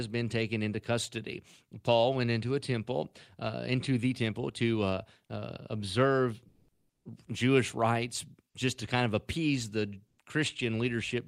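At 6.48 s, right after "to uh uh observe", the faint background, about 57 dB below the loudest passages, gives way for 0.57 s to a flat, featureless hiss about 3 dB different in level. It happens again at 10.07 s after "kind of appease the", for 0.11 s with a shift of about 4 dB. This is comfort noise in place of the background, likely from Opus discontinuous transmission. Unlike a gate or dropout, the pause is filled with synthetic noise, not silence.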